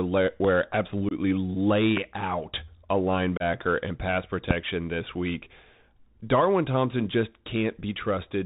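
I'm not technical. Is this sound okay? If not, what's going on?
No. Bluetooth CVSD headset codec, throughout: the speech passes through a phone-headset link that cuts everything above 4 kHz, leaving it muffled, gritty and hissy, with scratchy s sounds.

Loud pops, at 0.45, 1.97 and 4.51 s: sharp clicks jump out over the speech, most likely from sudden electrical spikes such as a plug, switch or static.

Unconcealed Bluetooth headset packet loss, at 1.09 to 1.13 s and 3.37 to 3.43 s: a few small chunks of audio never arrived, leaving abrupt gaps of 22.5 and 30 ms.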